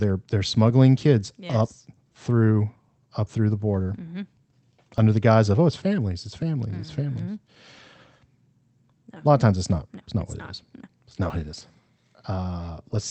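From 0.01 s to 12.95 s the speech carries repeated timing corrections. The receiver keeps trimming tiny slices so playback runs at about 105% speed, heard as faint hiccups and a slightly hurried, uneven pace. On a waveform these appear as small, irregularly spaced seams where syllables are shortened.

That pattern comes from clock drift between sender and receiver. The sender's clock runs around five percent fast, so the jitter buffer keeps overfilling and must discard audio. On a spectrogram the harmonics show tiny breaks and shifts at uneven intervals across the whole clip.

At 4.98 s the sound jumps ahead by roughly 20 ms, likely a dropped buffer (overrun), where unread samples were overwritten. The waveform shows an abrupt discontinuity with no gap of silence, and the spectrogram shows a thin vertical broadband stripe. At 11.3 s a larger jump of roughly 70 ms produces the same kind of skip.

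Through all of this the Opus call path keeps its band-limited character, with energy ending near 8 kHz.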